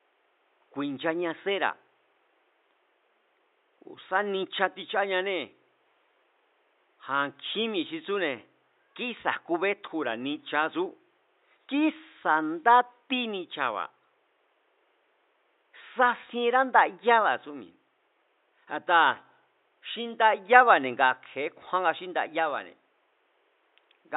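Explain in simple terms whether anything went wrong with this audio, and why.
Nothing went wrong with this speech recording: the signal comes through without any technical problem, and the faint background sound of the room, which sits far below the speech, is simply part of where it was recorded rather than a fault.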